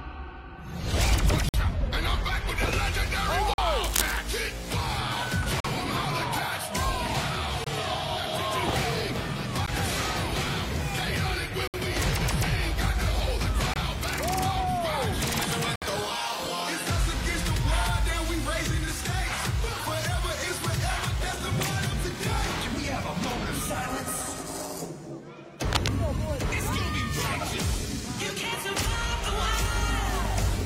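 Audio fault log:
1.49–1.54, 3.54–3.58, 5.60–5.65, 7.64–7.67, 9.66, 11.67–11.74, 13.74–13.76 and 15.76–15.82 s: gap between stream segments. The sound stops dead for between 14 and 64 ms, then resumes with hard edges, repeating about every 2 s, which fits 2-second segments whose time stamps don't quite meet. The player fills each hole with silence, so unlike a dropout, nothing is missing. The sound simply resumes slightly later each time.
3.82–4.17 and 25.71–25.89 s: cable scratch noise. Dense, uneven bursts of scratching or rustling sit over the sound, roughly as loud as the sound itself, for about a third of a second and then a fifth of a second. The likely cause is a worn cable, connector or control being moved, making its contact resistance jump rapidly. The irregular texture and short, isolated bursts set it apart from steady hiss or regular clicks.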